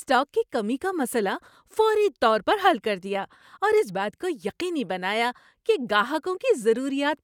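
No technical faults can be heard anywhere in the speech recording.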